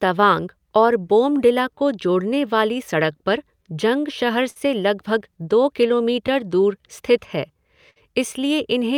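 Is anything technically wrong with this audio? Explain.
Yes. There is clock drift between sender and receiver throughout this speech. The sender's clock runs about 5% slow, so the receiver's jitter buffer keeps draining. On a spectrogram, harmonic tracks show faint discontinuities where pieces are duplicated, and the waveform's timing wanders slightly.

Repeated timing corrections run from 0.06 to 8.83 s. The receiver keeps repeating short pieces to make up the shortfall, playing at 96% speed and adding roughly 300 ms overall. This sounds like a slightly dragging, unsteady tempo. On a waveform, short segments appear twice, unevenly spaced.

There are two short stalls from late packets, at 4.50–4.58 s and 7.91–7.98 s. Each time the buffer ran empty, and the last sound was stretched for 56 ms and then 54 ms before playback resumed, with nothing lost. Each stall is heard as a held sound with a slight buzz or dip. 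A spectrogram shows flat, frozen bands.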